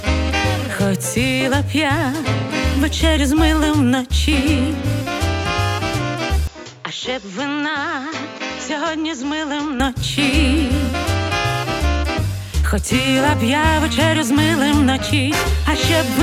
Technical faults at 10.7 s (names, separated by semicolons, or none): none